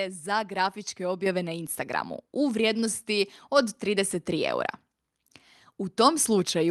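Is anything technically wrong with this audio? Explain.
Yes. At 1.26 s the whole sound gets abruptly louder by about 7 dB, and the speech and the background noise behind it rise together in a single step rather than gradually. That joint jump is the signature of a microphone volume stepped up: the call software judged the input too quiet and raised the device's capture gain at once, so everything the microphone picks up is amplified equally. The audio also passed through the call codec, whose top end stops around 12 kHz.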